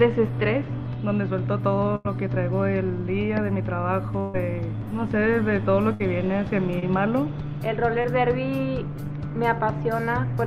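At 1.95 to 2.07 s, 4.20 to 4.36 s and 5.94 to 6.02 s the sound freezes into a held buzz or hiss that fades, then picks up again further along with a piece missing. These are bursts of packet loss: roughly 80, 140 and 60 ms of audio never arrived, and the receiver stretched the last sound across each gap while lowering it.

Later, at 6.80 to 6.84 s and 8.01 to 8.06 s, there are much briefer smears, a quick wobble rather than a held tone, where a short sound can drop out entirely. These are short concealed packet losses of about 20 ms each. The decoder covered each hole by continuing the previous sound, pitched or noise-like, and then blended back into the real signal.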